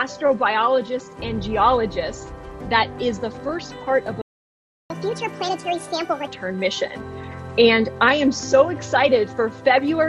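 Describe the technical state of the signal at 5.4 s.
At 5.4 s the sound is running fast and pitched up, roughly seven semitones higher, as if sped-up tape were playing, and it stays that way from 4.90 s until it snaps back to normal at 6.27 s. This is catch-up at higher speed: after a stall, the player resamples its backlog at 1.5 times normal speed to recover the lost time. Because resampling shifts pitch along with tempo, both rise together until normal speed returns.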